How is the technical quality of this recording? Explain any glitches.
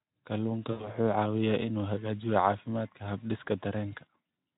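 There is one glitch, a short concealed dropout in the speech from 0.71 to 0.89 s, heard through the light hoarseness of a Speex-coded line. In that span the voice smears into a fading buzzy tone or coloured noise and stays weak just after. This is VoIP packet loss concealed by the speech codec. About 80 ms of data went missing, which fits roughly four 20 ms frames, so the decoder repeated its last pitch and filter at falling gain and needed a moment to recover.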